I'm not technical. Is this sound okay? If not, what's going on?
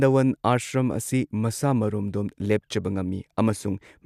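Yes, it's fine: nothing is going wrong with this recording, so there's nothing here you need to worry about.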